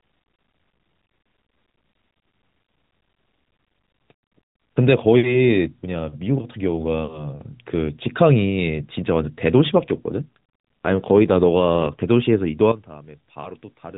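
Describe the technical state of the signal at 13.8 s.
At 13.8 s the signal sits inside a sudden gain jump that begins at 12.72 s and runs to the end of the clip. The level drops by about 12 dB in a single step, with speech and background noise falling together. The likely cause is a digital gain change applied without a ramp. Unlike a fade or automatic gain control, there is no gradual slope, and the narrowband, 4 kHz-limited mobile-codec tone stays unchanged.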